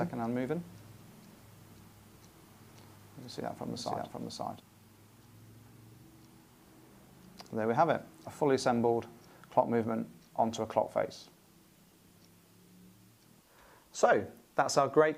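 From the very start until 4.6 s, a doubled audio track runs: a second, full-band copy trails the original by roughly half a second at about the same level, likely from a slower capture path or two out-of-step copies in an edit. Unlike an echo or reverb, the copy carries no decay or room colour, and it doesn't fade. At 4.6 s it simply cuts off, leaving the single track.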